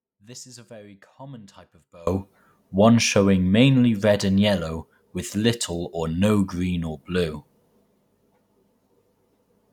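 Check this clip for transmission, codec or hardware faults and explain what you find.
One fault is present. The clip opens in an audio dropout to a faint residue, already under way, lasting until 2.07 s. Only a faint sound remains, roughly 25 dB down. The signal was likely interrupted while the path stayed live. Full level returns abruptly.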